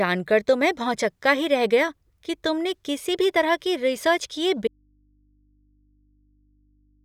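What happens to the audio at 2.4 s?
Nothing goes wrong at 2.4 s; the speech there plays through intact, with no dropout, glitch or other fault audible at that moment.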